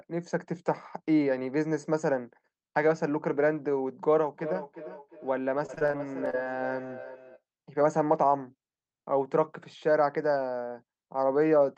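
From 4.27 s to 7.42 s there's a feedback echo between two devices: a second device in the room replays the call, its mic catches that, and the local echo canceller can't remove it. Each phrase comes back roughly every 0.4 s, thin and ringy, peaking about 11 dB under the speech.

Inside that stretch, from 5.59 s to 6.47 s, repeated packet loss (robotic sound) kicks in: a run of short holes, none longer than 30 ms, each patched by stretching the previous sound. About a quarter of that span is filled in, so it comes across choppy. All of this rides on a call codec path whose top end stops around 8 kHz.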